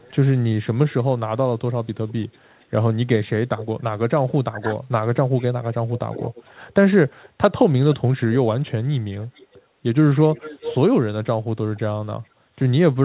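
From the start to 3.66 s there's an echo leak: a faint copy of the speech trails about 0.44 s behind, roughly 20 dB down. The far end's echo canceller likely let some of its loudspeaker pickup slip back through. Between 4.28 and 4.71 s the speech is suppressed in double talk. The level sinks by something like 15 dB in patches, probably because the canceller mistook the talker for echo while both sides spoke and ducked everything. The echo leak returns at 5.38 s and runs to the end, louder this time at roughly 15 dB below the speech and again about 0.45 s late. Two more short double-talk dips land at 8.04–8.08 s and 12.56–12.66 s, each a quick dip in the speech. Under all this, nothing comes through above 4 kHz, which fits a narrowband call codec like G.711.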